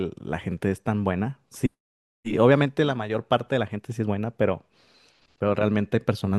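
Speech recording with no audible technical faults anywhere in the clip.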